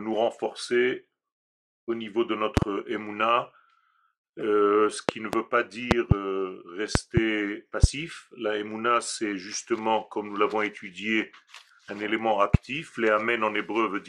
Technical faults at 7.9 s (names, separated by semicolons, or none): loud pop